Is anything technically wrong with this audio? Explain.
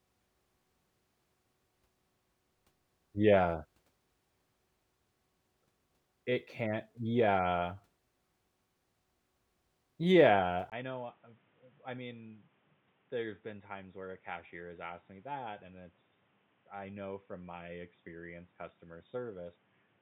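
Yes. From 10.70 s to the end, the speech turns dull and boxy, most likely because the input switched to a poorer device partway through. A brief silence of about 20 ms marks the switch, after which nothing is left above 3.8 kHz and the level falls by around 10 dB. A new background noise sits roughly 30 dB under the speech. On a spectrogram the upper band is cut off sharply at that point, and the waveform narrows after the short gap.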